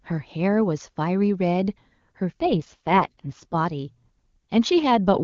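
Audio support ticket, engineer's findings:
AMR rate drop, 2.3 to 3.56 s. Speech turns rough, raspy and synthetic for about 1.3 s, then clears. No gap, no bandwidth change. Consistent with the link forcing AMR-WB from its top rate down to its lowest, spending bits on error protection. Spectrogram: band edge near 7 kHz unchanged, harmonics smeared and noisy within the segment. Waveform: level continuous, no dropout. Clear HD Voice on either side.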